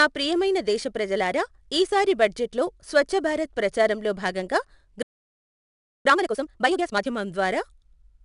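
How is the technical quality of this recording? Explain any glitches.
The technical quality is poor, with three problems. A gritty, level-following hiss runs through the whole speech clip and the sound is dull at the top, the speech cuts out for about a second, and then it rushes.

4-bit ADPCM compression (throughout): Every louder stretch of speech carries a rough, grainy hiss, and sharp attacks sound distorted. The codec codes each sample as a coarse 4-bit step from a predicted value. Its error therefore rises and falls with the signal, and its step size can't keep up with sudden onsets. A data rate near 89 kbps at 4 bits per sample means a reduced sample rate of about 22 kHz, so nothing reaches above about 11 kHz.

Playback stall (5.03 to 6.05 s): Right after "లో స్వఛ్ఛభారత్ ప్రచారంలో భాగంగా" the speech stops dead in mid-flow and stays silent for about 1.02 s before resuming. The likely cause is that the player ran out of buffered data or its thread was blocked, so the output had nothing to play until it recovered.

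Time-compressed catch-up (6.05 to 7.07 s): When the speech resumes, it runs at 2x speed for about a second. The pitch stays normal, but the speech sounds hurried. The player is clearing its backlog by cutting out small pieces and cross-fading the remainder together.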